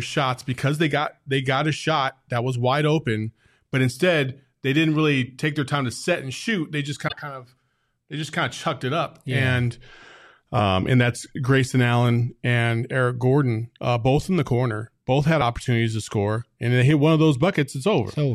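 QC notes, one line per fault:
7.04 to 7.13 s, damaged data in a compressed stream: a short glitch in the speech just before "kind of they just". The decoder hits corrupted frames, misreads them and hunts for the next valid frame header.
15.40 s, damaged data in a compressed stream: a brief blip right before "to score and they", from the same loss of frame sync.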